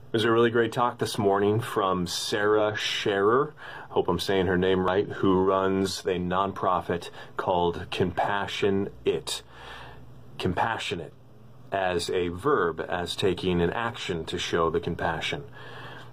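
At 2.56 to 2.61 s and again at 4.88 s, damaged data in a compressed stream makes the decoder lose sync and search for the next frame header.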